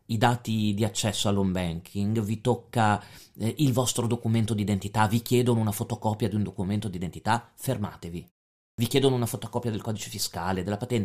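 At 8.70 s, after "un documento d'identità fermatevi" and a pause of about 0.47 s, there is a clipped start after a pause. The sleeping output device wakes late, swallowing 83 ms, so speech snaps in abruptly at "chiedono una fotocopia del". Unlike a dropout, nothing vanishes mid-sound.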